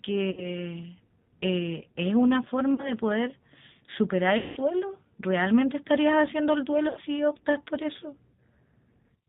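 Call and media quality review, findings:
G.729 codec damage, whole clip. Speech rough and slightly synthetic, nothing above 4 kHz. Sound fits G.729A at 8 kbit/s. Each 10 ms frame is rebuilt from a tract filter, pitch predictor and sparse pulses, so fine detail is lost.

VoIP packet loss concealed by the speech codec at 0.31–0.58, 2.74–2.93, 4.38–4.57 and 6.89–7.00 s. Losses of 60, 40, 180 and 80 ms. Buzzy tone or coloured noise, fading. Decoder extrapolates the last pitch and filter with falling gain. Speech stays weak just after.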